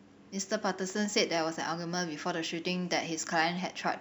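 From start to finish, the speech carries a crude rate conversion. The audio was resampled upward by a ratio of about 1.38, which fits a change from 32 kHz to 44.1 kHz. Samples were linearly interpolated with no proper filter. The interpolation error repeats in a fixed pattern and creates shifted, inharmonic copies of the speech. They sit roughly 30 dB below it. They sound like a faint, gritty fizz that rides on louder and brighter sounds.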